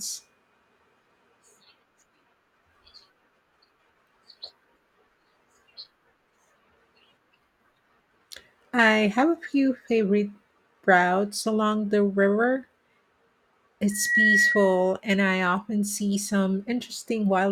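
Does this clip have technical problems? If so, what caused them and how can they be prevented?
Yes. A loudspeaker feedback squeal runs from 13.90 to 14.93 s in this speech clip: the microphone picks up its own loudspeaker, and at 1.9 kHz the loop gain tops one, so that tone swells over roughly a third of a second to about 5 dB above the speech. A spectrogram shows a bright horizontal line at 1.9 kHz; the waveform shows a rising, fattening envelope. Lowering gain, moving the microphone off-axis from the speaker, or notching 1.9 kHz prevents it.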